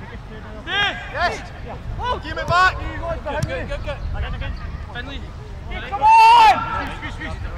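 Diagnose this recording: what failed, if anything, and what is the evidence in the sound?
Overlapping chunks at 0.83, 1.84, 2.84, 3.85, 5.86 and 6.87 s: a brief click-stutter recurs about once per second. The buffer stage is handing on 1-second blocks that each start about 7 ms early, so that sliver of sound plays twice at every join.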